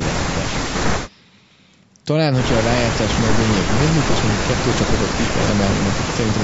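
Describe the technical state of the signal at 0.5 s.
At 0.5 s the signal is intact, with only the ordinary high-pass filtering of call microphone processing, which takes out the lowest bass.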